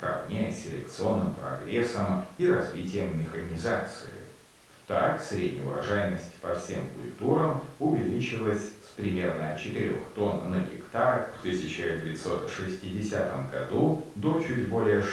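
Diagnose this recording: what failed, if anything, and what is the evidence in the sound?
Nothing in this speech recording stood out as a failure on listening, with the call path's coding and band limit near 12 kHz and the quiet room noise about 36 dB below the speech both sounding as expected.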